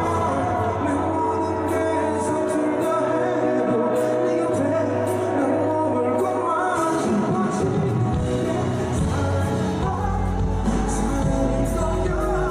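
At 10.01 s a steady 50 Hz mains hum appears and lasts to the end at 12.5 s. It sits only about 5 dB below the wanted sound. The power line is leaking into the signal, through a ground loop or a nearby transformer.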